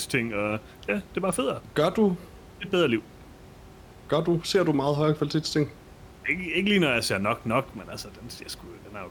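No technical faults can be heard anywhere in this recording.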